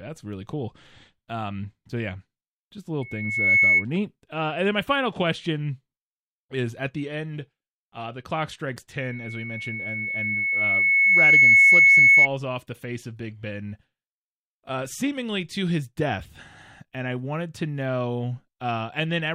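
Speech with loudspeaker feedback squeal. A 2.2 kHz tone swells from 3.01 to 3.85 s, after "so yeah just little". It returns from 8.98 to 12.28 s, after "uh the clock strikes", ending before "off the face of". The microphone is re-amplifying its own loudspeaker.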